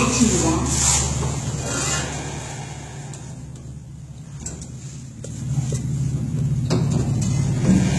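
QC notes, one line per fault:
throughout, HE-AAC compression: the treble sounds synthetic and gritty, with upper detail turning metallic and lispy, as it does when the top octaves are rebuilt by copying lower bands upward. Heavy damage of this kind likely points to a low bitrate, around 16 kbps.
5.16–5.52 s, zipper noise: a fast ticking zip rides on the sound while the level changes by roughly 10 dB. The change is made in about 1 dB steps at around fifty per second, and each unsmoothed step leaves a small click.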